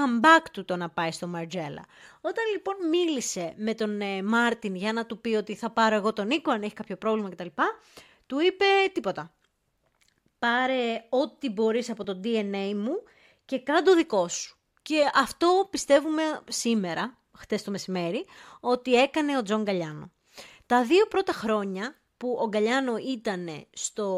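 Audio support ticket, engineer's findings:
Dropped buffer (overrun) at 12.04 s, after "μπορείς από": speech jumps ahead roughly 10 ms. Likely capture overrun. Waveform shows abrupt splice discontinuity; spectrogram shows thin broadband vertical line.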